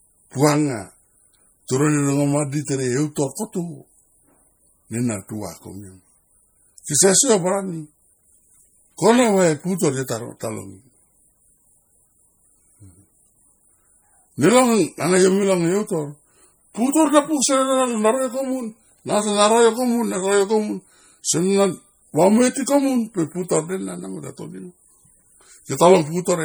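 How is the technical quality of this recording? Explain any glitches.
The recording has plainly audible compression damage throughout. Likely MP3 encoding starved of bits, consistent with a low rate around 48 kbps, has zeroed weak frequency lines from frame to frame, so the speech sounds watery and swirly, with chirpy s sounds and smeared attacks, though content still reaches about 21.1 kHz.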